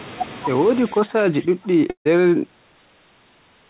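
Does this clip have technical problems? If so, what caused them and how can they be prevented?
Yes. The echo canceller likely mistook simultaneous talk from both ends for loudspeaker echo and clamped the near speech. This is speech suppressed in double talk: from 0.86 to 1.75 s the speech sinks by up to about 20 dB, and from 2.41 to 2.61 s it dips by about 10 dB. Using a headset or an echo canceller with better double-talk detection would prevent it.

A long network dropout likely cut off incoming packets between 1.90 and 2.07 s. The receiver bridged the gap with about 0.15 s of fading buzzy fill, then about 0.11 s of silence, and roughly 0.16 s of speech never returns. A steadier connection or more forward error correction would prevent this.

The band stops at 4 kHz, which fits a G.711 A-law call.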